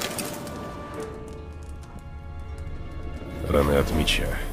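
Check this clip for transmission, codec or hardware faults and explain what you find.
Two compressed frames skipped faults are present. At 2.44 s the audio jumps ahead by roughly 150 ms, and at 3.53 s by roughly 100 ms. Both skips are multiples of a 23.2 ms frame, which points to a handful of frames lost from the file or rejected by the decoder as damaged. Because adjacent frames overlap, each join is a brief smeared blip, not a hard click.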